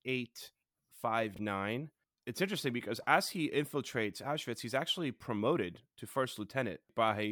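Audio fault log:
1.34–1.39 s, chunks out of order: for about 43 ms the speech jumps sideways. A block of roughly 21 ms arrived one block late and was played after the block that should have followed it, so two neighbouring pieces swap places. No sound is lost, but the sequence runs forward, back, then forward again across three hard joins, which is why the moment sounds briefly scrambled.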